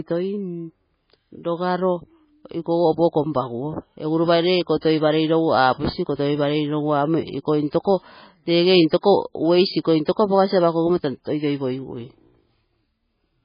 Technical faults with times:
0.00-13.44 MP3 compression

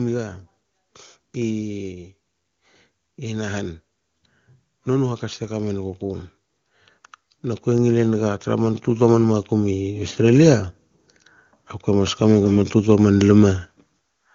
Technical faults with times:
7.64-10.58 automatic gain rising
11.85-13.55 automatic gain rising

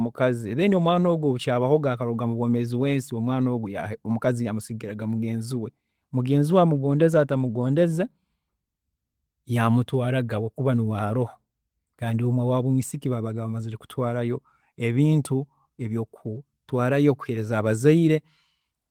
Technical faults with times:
none

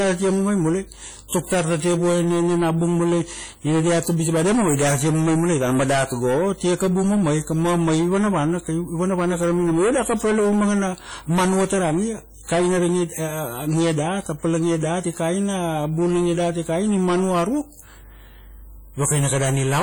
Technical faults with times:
0.00-19.83 hard clipping
0.00-19.83 WMA compression

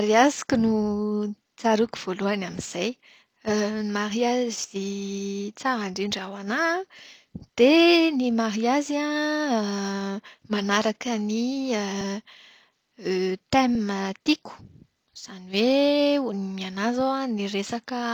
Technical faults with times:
0.00-18.14 sample clock jitter

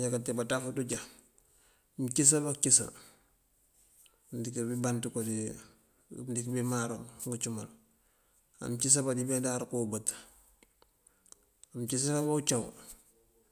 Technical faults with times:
none

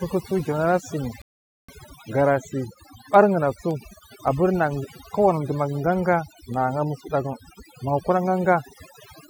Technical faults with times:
0.00-9.29 overdone noise removal
0.41-8.80 word clock ticks
1.22-1.69 rebuffering stall

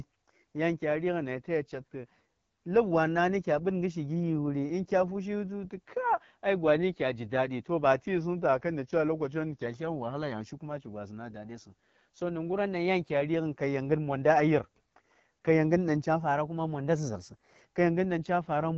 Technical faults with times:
0.00-18.77 AMR wideband (HD Voice) codec
8.08-9.66 drift correction step
12.53-13.10 drift correction step
16.20-17.62 drift correction step

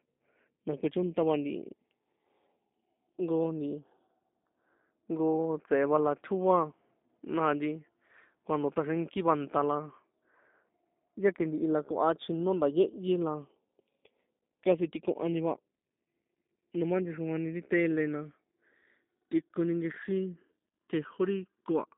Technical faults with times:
0.00-21.97 G.729 codec

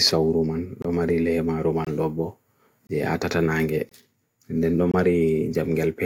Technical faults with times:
0.82-0.85 gap between chunks
1.85-1.87 gap between chunks
2.87-2.89 gap between chunks
3.89-3.92 gap between chunks
4.92-4.94 gap between chunks

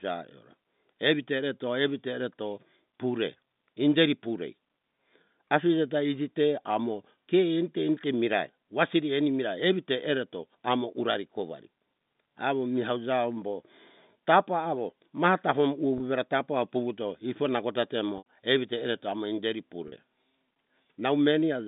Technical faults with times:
15.98-16.00 packet loss with pitch repetition
18.18-18.24 packet loss with pitch repetition
19.88-19.92 packet loss with pitch repetition

